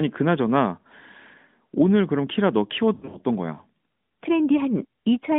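From 2.94 to 3.17 s there are lost AMR speech frames. Radio errors broke several 20 ms frames, and the decoder filled each gap by repeating the last good pitch and vocal tract settings at falling gain. The gaps are scattered. About 140 ms goes missing, which points to roughly seven frames, and the longest run is 80 ms. The speech dips and warbles, smears briefly, then returns weak and rough, all within the narrowband mobile line's muffled 3.6 kHz top.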